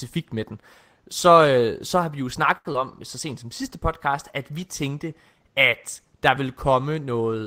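A short stall from a late packet comes at 2.57 to 2.67 s. A packet was not there when it was due, so the jitter buffer ran dry and the receiver stretched the last bit of speech for about 75 ms until the data turned up. Playback then resumed from the same point, so nothing is lost, but the sound is held unnaturally long with a faint buzz, and everything after it runs about 75 ms later than before.

A short concealed packet loss follows right after, at 2.73 to 2.76 s. Here about 20 ms of the call never reached the decoder in time. The receiver covered the gap by extending what came just before, roughly 14 ms of synthesized continuation, then blended back into the real signal. It comes across as a brief smear or wobble, and since a stretch of genuine audio is gone, a short consonant at that spot may be clipped or missing.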